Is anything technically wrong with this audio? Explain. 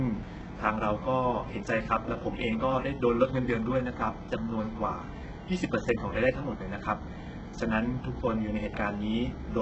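Yes. Throughout the speech, the treble sounds artificial: s sounds come out gritty, metallic and lispy, and nothing reaches above 8 kHz. The damage is heavy, and the likely cause is HE-AAC compression at a very low bitrate, around 8 kbps. The codec keeps only the lower spectrum and synthesises the treble by copying lower bands upward under a coarse envelope, so the upper harmonics no longer line up with the real ones.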